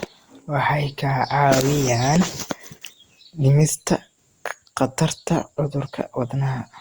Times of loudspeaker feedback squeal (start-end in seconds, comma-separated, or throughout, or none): none